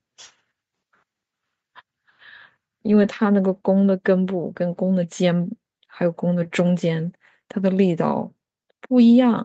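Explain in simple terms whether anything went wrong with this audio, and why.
Nothing went wrong here: the speech just went through an ordinary call setup, which is why the very lowest bass is trimmed away and nothing reaches above 8 kHz, and that's simply how a call is meant to sound.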